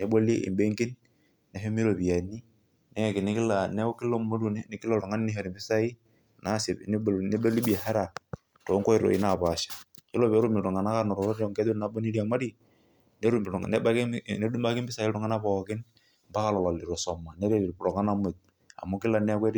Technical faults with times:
none

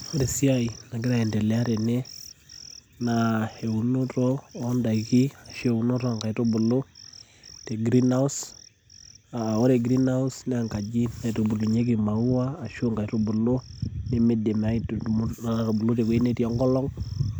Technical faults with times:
11.75-15.33 de-emphasis applied wrongly

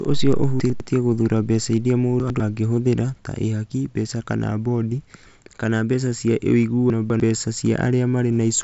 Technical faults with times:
0.60-0.80 chunks out of order
2.20-2.40 chunks out of order
6.90-7.20 chunks out of order

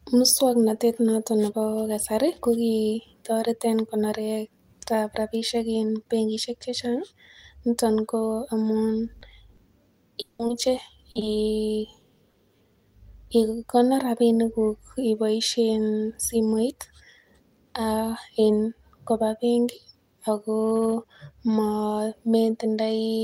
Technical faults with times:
9.19-9.23 short concealed packet loss
9.55-9.59 short concealed packet loss
10.21-10.41 long network dropout
10.47-10.51 short concealed packet loss
11.11-11.35 short concealed packet loss
12.30-12.36 short concealed packet loss

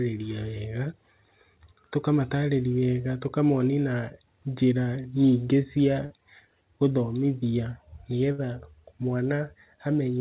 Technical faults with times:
6.06-6.12 short concealed packet loss
8.32-8.40 burst of packet loss

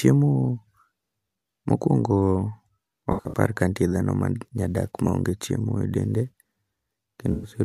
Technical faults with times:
3.12-3.38 AAC frame loss with concealment
7.32-7.51 AAC frame loss with concealment

